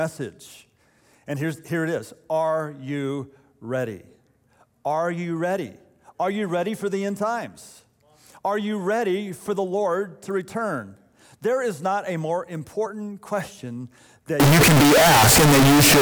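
From 14.40 s to the end, the sound turns loud and harsh, almost a square wave at an almost fixed, high level. The likely cause is float read as integer, with float samples decoded as integers.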